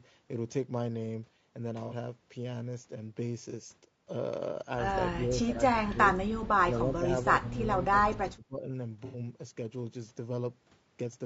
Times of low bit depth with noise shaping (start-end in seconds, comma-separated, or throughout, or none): none